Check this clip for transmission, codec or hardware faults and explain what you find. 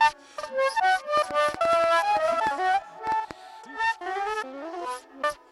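A train of clicks runs from 1.17 to 3.32 s, likely from interference or a faulty connection injecting pulses: about ten irregular ticks, roughly five per second, peaking about 10 dB above the sound.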